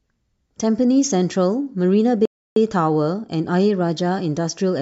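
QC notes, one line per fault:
2.25–2.56 s rebuffering stall: the speech drops to silence for 0.31 s, then picks up exactly where it halted, because playback ran dry waiting for data.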